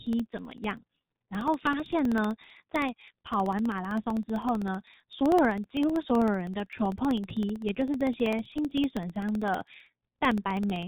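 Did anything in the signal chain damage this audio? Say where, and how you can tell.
Yes. The speech sounds muffled and hoarse throughout, with smeared consonants and nothing above 3.8 kHz. This is damage at the codec stage from G.723.1 at 6.3 kbit/s. Its 30 ms frames and slowly updated voice model throw away fine detail and blur fast transitions.

Small regular ticks run from 0.07 s to 10.83 s, one every 0.064 s, and are audible only while speech is present. These are periodic USB or driver dropouts. The bus or driver stalls at a fixed interval, and each time roughly a millisecond of audio becomes silence, around 150 times in all.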